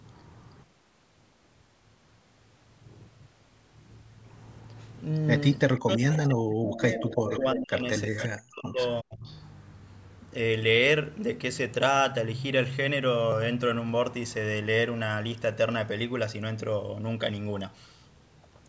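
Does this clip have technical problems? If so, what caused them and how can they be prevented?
Yes. Echo leak: the far end's echo canceller likely let loudspeaker pickup through, so delayed copies of the speech return at 5.75–6.22, 6.73–7.40, 8.17–8.27 and 9.26–9.34 s. They lag by 334 ms at first and 370 ms later, and sit roughly 10 to 15 dB below the speech, with the last one far fainter. Prevent this by using a headset or a better-converging echo canceller that tracks the changing echo path.

Speech suppressed in double talk: with both sides talking, the echo canceller likely could not tell the talker from the echo and attenuated both. The speech from 5.79 to 9.27 s dips and cuts out for about three seconds in total, at worst by roughly 40 dB. Prevent this with a full-duplex echo canceller whose double-talk detection keeps near-end speech instead of suppressing it.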